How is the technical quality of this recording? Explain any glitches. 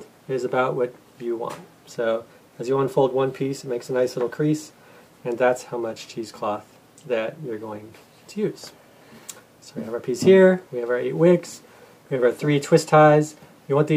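No glitches or technical faults are audible anywhere in this recording.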